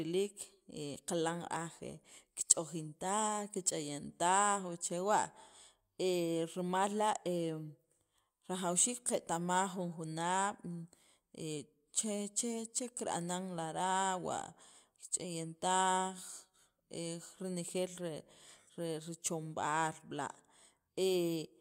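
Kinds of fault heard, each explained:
No technical faults can be heard in the speech signal: level, continuity and frequency range hold steady throughout, with no interruptions, distortion or added noise.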